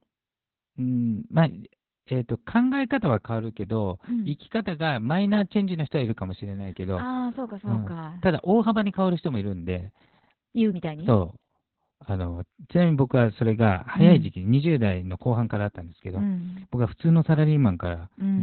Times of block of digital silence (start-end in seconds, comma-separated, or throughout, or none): none